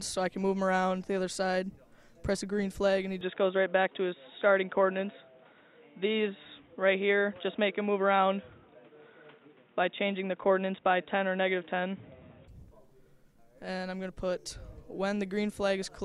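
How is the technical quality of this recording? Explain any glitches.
The recording has one fault. From 3.21 to 12.48 s the input likely switched to a poorer device. Its narrower band makes the sound dull or boxy, with level shifting around 5 dB, new noise roughly 40 dB down, and clearing at 12.48 s without any gap.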